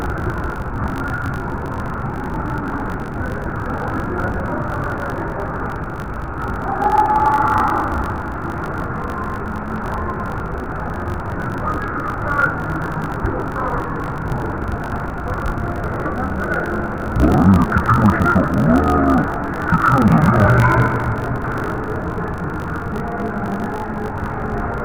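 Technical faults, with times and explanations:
Throughout, interleaved audio read as planar: the player takes each 20 ms block of alternating left and right samples as two separate channel runs, the first half feeding left and the second half feeding right, so each half is stretched across the whole block at half speed. The sound drops an octave, goes dull and robotic, and carries a buzz at 50 Hz, the rate at which the blocks restart.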